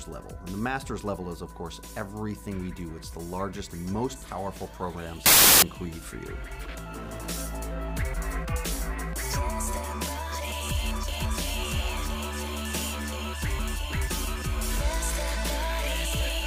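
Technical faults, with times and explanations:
5.26–5.62 s: samples built from the wrong bytes. Misaligned byte assembly promotes the rapidly changing low bits to the top of each value, bursting into loud, harsh broadband noise for about 0.37 s.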